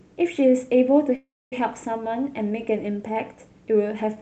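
From 1.15 to 1.53 s the speech stops, and a brief fading buzz trails into about a quarter second of silence before it resumes with nothing lost, only later. This is a call audio freeze, likely from delayed packets emptying the jitter buffer.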